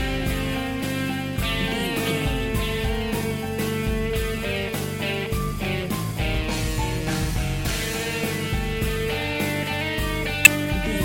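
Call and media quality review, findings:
Damaged data in a compressed stream. Three short blips, each about 18 ms, at 0.82 s, 3.58 s and 10.45 s. Component: compressed stream or decoder input. Mechanism: corrupted bytes reach the decoder. It misreads or drops the affected frame, loses sync and hunts for the next frame header. The sound breaks briefly at each point and then recovers.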